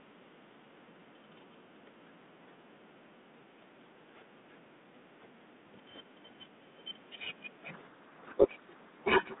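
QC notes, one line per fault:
7.72–9.40 s, codec payload misread: the receiver unpacks the G.726 code words with their bits in the wrong order. The decoder then rebuilds wrong difference values from valid-looking frames, so the speech is buried in harsh distortion through to the end.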